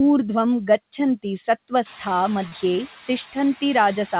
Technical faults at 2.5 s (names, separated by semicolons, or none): noise suppressor artifacts; short concealed packet loss